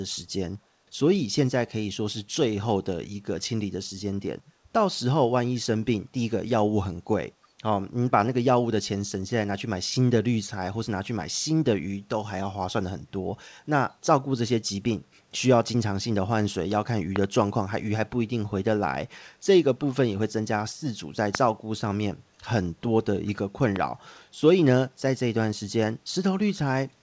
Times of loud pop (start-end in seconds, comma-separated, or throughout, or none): 17.16-17.26, 21.35-21.37, 23.76-23.78